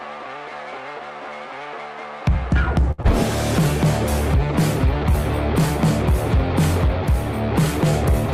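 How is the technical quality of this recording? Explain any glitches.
Two brief network glitches sit close together, just before and after the three-second mark.

From 2.91 to 3.00 s there is a short stall from a late packet. Playout ran dry, so the last sound was held for about 68 ms; a spectrogram shows flat, frozen bands.

From 3.02 to 3.06 s there is short concealed packet loss. Around 20 ms went missing, patched with synthesized continuation, heard as a tiny smear and visible as a smoothed waveform stretch.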